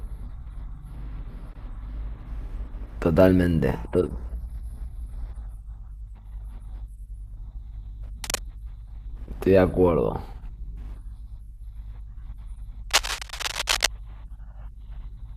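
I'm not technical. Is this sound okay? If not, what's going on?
No. There's cable scratch noise: rough scratchy bursts, about as loud as the speech, at 8.24–8.41 s and 12.89–13.89 s, likely from a worn cable or plug being moved.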